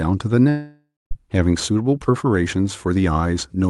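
Long network dropout, 0.49 to 1.13 s, in this speech clip: the last sound smears into a fading buzz, then silence, and speech resumes with a stretch missing, likely from lost packets.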